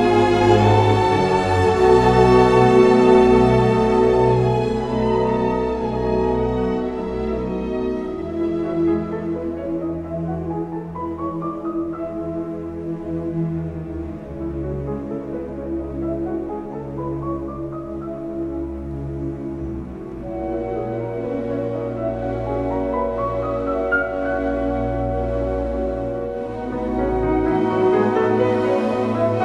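From 4.84 to 7.91 s, channel delay (comb filtering): a roughly one-sample lag dulls the mono sum; the spectrogram's highs fade toward 20 kHz.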